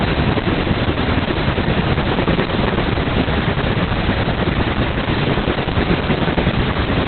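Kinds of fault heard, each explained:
Opus voice compression: The whole clip has been squeezed through Opus in its speech-oriented SILK mode, and hard. Nothing survives above 4.3 kHz, so the speech has that narrowband telephone dullness, and the excitation is coded so coarsely that it comes across hoarse and faintly robotic throughout. That heavy a narrowing and that much roughness point to a very low bitrate, around 8 kbps, with 20 ms frames.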